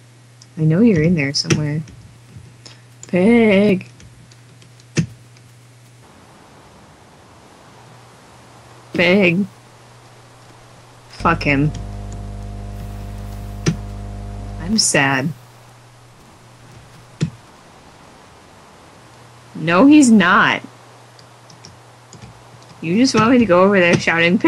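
From 11.2 to 14.73 s there's mains hum, a steady 50 Hz tone about 15 dB under the signal, from a ground loop or nearby transformer leaking power-line current into the audio.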